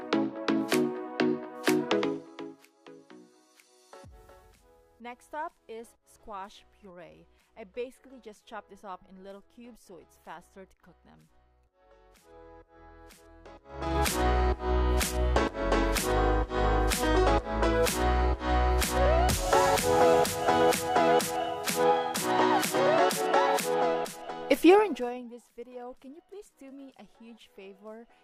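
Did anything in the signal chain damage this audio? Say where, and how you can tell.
Yes. Zipper noise, from gain applied in unsmoothed steps in a buffer-rate processing stage: regular ticking of about 20 steps per second rides each level move of roughly 25 dB, at 1.92–2.65 s (1 dB steps), 13.61–14.00 s (3 dB) and 24.70–25.26 s (2 dB). Unlike random clicks, the ticks appear only while the level is changing.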